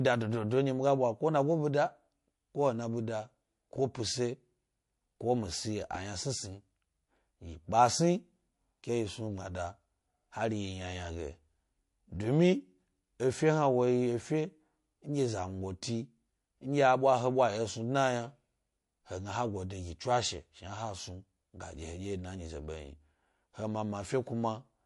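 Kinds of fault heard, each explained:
MP3 compression: the speech sounds watery and swirly with dulled treble throughout, likely from MP3 at about 48 kbps; flickering weak components distinguish it from simple low-pass filtering.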